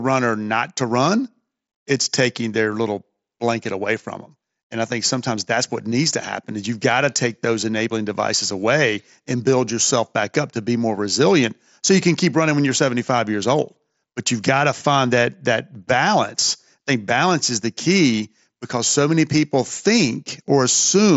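No technical faults can be heard in the speech, which comes through a Bluetooth mSBC headset link with its usual top end near 7.7 kHz.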